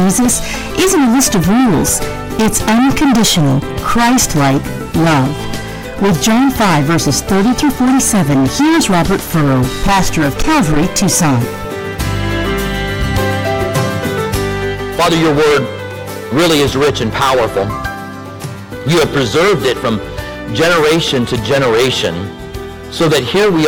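A harsh, constant fuzz rides on every loud moment from start to finish. This is hard clipping: the signal was driven about 22 dB past what a stage could pass, so nearly a third of the waveform has its peaks sheared flat, spraying high harmonics.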